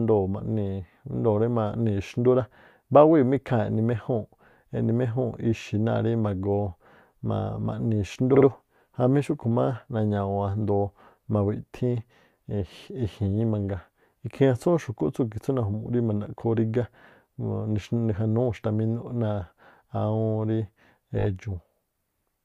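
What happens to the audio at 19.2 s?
Nothing goes wrong at 19.2 s; the speech carries on intact through that moment with no dropout, click or distortion.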